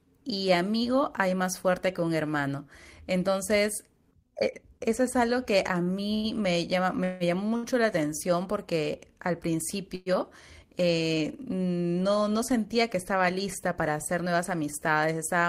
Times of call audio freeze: 7.04-7.23, 9.95-10.09

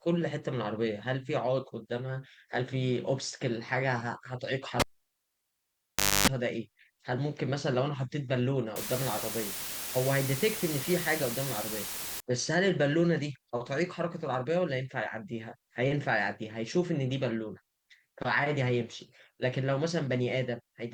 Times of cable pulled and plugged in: 4.80-6.28

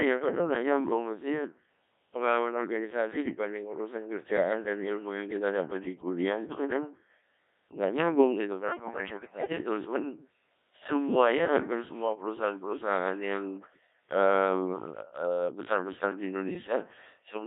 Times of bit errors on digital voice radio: 8.68-9.52

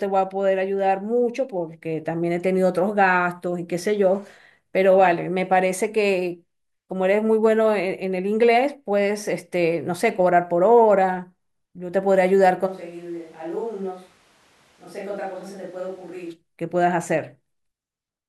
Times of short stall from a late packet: none

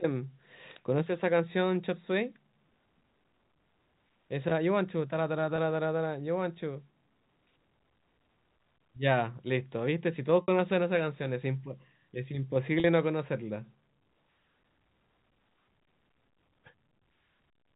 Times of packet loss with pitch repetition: 5.56-5.58, 10.42-10.48, 12.80-12.84

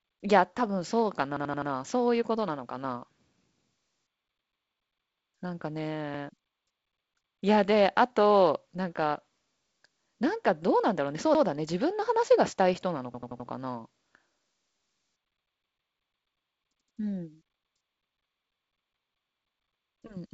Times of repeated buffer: 1.37-1.71, 13.14-13.48

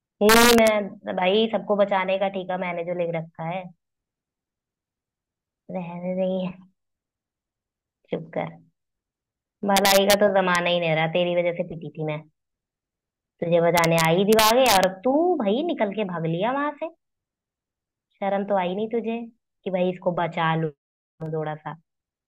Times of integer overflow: 0.29-0.68, 9.77-10.14, 10.55, 13.77-14.83

